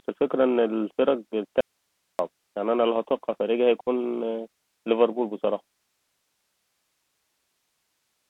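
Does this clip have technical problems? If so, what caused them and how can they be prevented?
Yes. The whole speech clip carries the Bluetooth CVSD headset codec: band limited to roughly 200 Hz–3.4 kHz, with granular hiss and scratchy sibilants from the one-bit adaptive step. Prevent by using a wideband headset profile or wired microphone.

From 1.61 to 2.19 s an audio dropout to a faint residue leaves about 0.58 s of hiss far below the speech, likely a lost input link. Prevent by stabilising the connection.

At 3.81 to 3.89 s, unconcealed Bluetooth headset packet loss punches a 60 ms abrupt hole, consistent with several lost voice packets. Prevent by reducing radio interference and distance.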